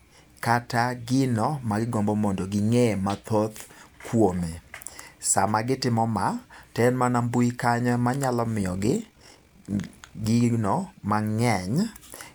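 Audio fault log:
8.62–10.27 s, overlap-add ripple: the speech level swings by about 6 dB at around 50 Hz, a rough flutter. Windowed frames were rejoined with overlaps that don't sum to constant gain. Unlike a slow tremolo, the pulsing is locked to the frame rate.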